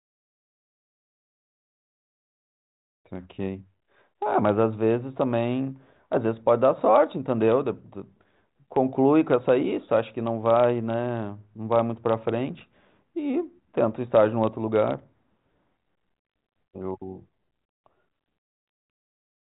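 Nothing goes wrong anywhere in this speech recording, which simply comes through a G.726 ADPCM link at 40 kbit/s, so everything above about 3.9 kHz is missing and any coding grain is faint at most.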